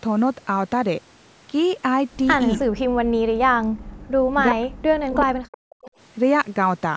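From 2.9 to 4.01 s and again from 4.5 to 5.77 s, the speech sinks hard, dropping around 40 dB at its deepest, with roughly a second lost each time. That's likely speech suppressed in double talk: the echo canceller couldn't tell this talker from the far side's echo and ducked everything.

Right after, between 5.82 and 5.91 s, there's a brief faint scrap of the voice again, arriving 374 ms late and sitting around 25 dB below the speech. It's likely an echo leak, where one side's canceller missed a bit of its loudspeaker pickup and sent it back.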